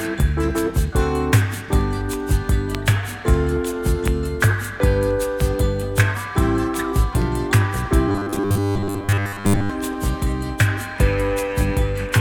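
From 8.09 to 9.70 s the audio turns robotic from repeated short buffers, a stiff 100 Hz buzz, likely a 10 ms chunk looping through most of it.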